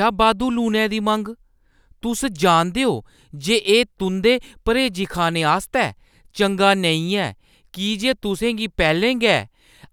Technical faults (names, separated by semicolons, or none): clock drift buffer slips